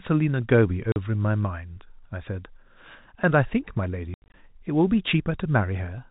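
At 0.92 s and again from 4.14 to 4.34 s, packet loss filled with silence: audio packets were lost and the receiver substituted nothing. The first hole lasts 40 ms; the second removes 140 ms in bursts up to 80 ms, consistent with 20 ms packets, punching gaps into the telephone-band speech.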